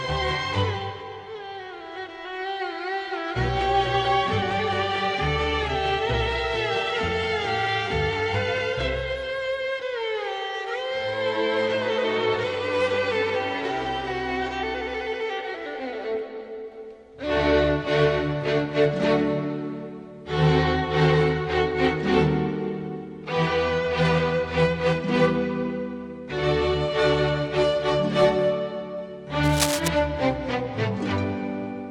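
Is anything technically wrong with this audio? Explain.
Yes. From 29.43 to 29.89 s, a burst of scratching, rustling noise sits over the sound for just under half a second, only a few decibels below it. This is cable scratch noise. It is likely caused by a worn cable, connector or control carrying a DC voltage being moved, so its contact resistance jumps about rapidly and injects dense, irregular bursts of noise into the signal for as long as the movement lasts.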